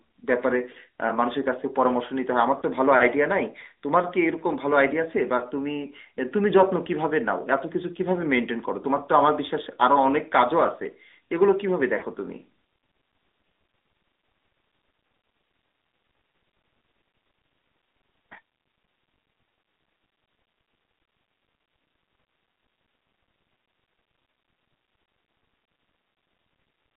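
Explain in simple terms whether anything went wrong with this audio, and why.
Yes, a couple of things went wrong. The whole speech clip has been through the AMR narrowband mobile codec, the standard old phone-call codec. It only carries roughly 250 Hz to 3.7 kHz, so everything sounds thin and boxed-in with no sparkle on the s sounds. It also rebuilds the voice from a simple model rather than the real waveform, which leaves an obvious buzzy, synthetic edge throughout.

On top of that there are lost AMR speech frames, three little glitches at 2.60–2.64 s, 5.38–5.44 s and 11.98–12.04 s. Each time, a chunk of data got corrupted on the way, so the decoder filled the gap by repeating its last good guess at the voice, a bit quieter. You hear a brief dip or warble. The first two sound like a single 20 ms frame went missing, and the one near 12 s is longer and fits two back-to-back.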